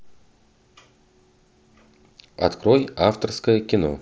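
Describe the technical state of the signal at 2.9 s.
At 2.9 s the speech is intact, with no fault at that moment.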